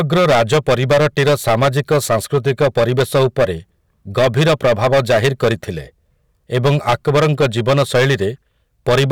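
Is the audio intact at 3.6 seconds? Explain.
No: hard clipping runs through the whole clip, the speech driven about 13 dB past the stage's ceiling so around a tenth of samples flatten, giving harsh fuzz on every loud sound.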